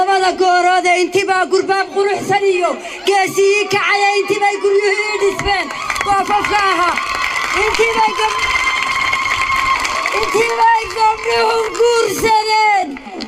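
From 10.28 s to the end, a time-stretched section slows the audio to about 0.64 times its pace, likely from software keeping pitch by repeating short slices. Unlike a slowed tape or wrong sample rate, pitch holds steady while the pace abruptly drags.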